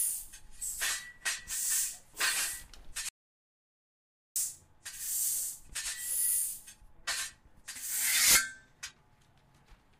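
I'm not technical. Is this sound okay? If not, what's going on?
No. From 3.09 s to 4.36 s the sound cuts off completely and then resumes mid-flow, leaving about 1.27 seconds of dead silence with no background hiss or room noise at all. This is an audio dropout to silence. The likely cause is that the input was briefly lost, through a loose connection, a failed link or an accidental mute, while recording carried on writing pure silence. Whatever happened during that gap is gone.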